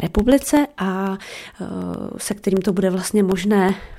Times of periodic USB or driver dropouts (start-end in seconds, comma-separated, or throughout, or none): 0.07-3.94